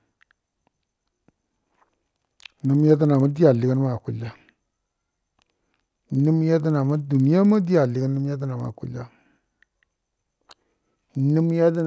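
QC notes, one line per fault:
throughout, resampler restarted on every block: a 20 Hz ticking buzz rides the speech, because each 50 ms block was resampled alone, leaving an error at every block edge.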